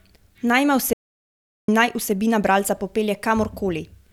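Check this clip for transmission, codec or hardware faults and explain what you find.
One fault is present: an audio dropout to silence from 0.93 to 1.68 s, about 0.75 s long, ending just before "in naj vsebina bralca". The input was likely lost while silence kept being written, so the speech stops abruptly and room tone vanishes. The waveform flattens to a straight line, and the spectrogram shows a fully blank vertical band.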